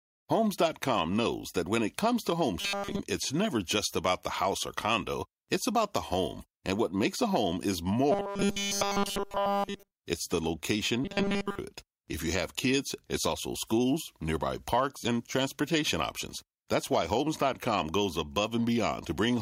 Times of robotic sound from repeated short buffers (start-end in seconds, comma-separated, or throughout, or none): 2.61-3.00, 8.12-9.93, 11.04-11.58